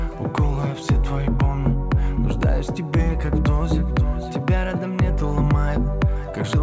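No faults are audible; the audio has come through a wideband call path whose content stops at 8 kHz, which fits a G.722 codec.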